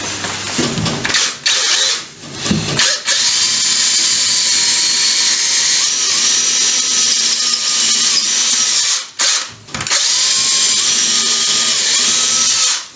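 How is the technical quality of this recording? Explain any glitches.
The main problem is gain pumping, and it runs through the whole recording. The level keeps getting pulled down under each loud moment, with a gain swing of roughly 25 dB. That's most likely the input gain set way too high for the mic, with a fast limiter or compressor slamming it back down on every peak. You end up with squashed dynamics. The call-style mic processing is there as well, with the top end stopping at about 8 kHz.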